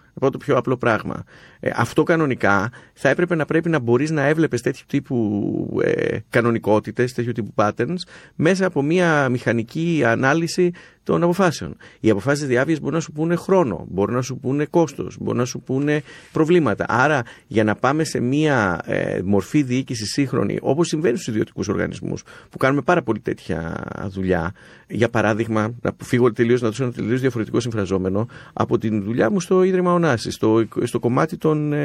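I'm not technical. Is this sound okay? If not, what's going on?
No. The speech sounds watery and swirly throughout, with dull treble and chirpy s sounds, likely from MP3 compression squeezed too hard, discarding fine detail.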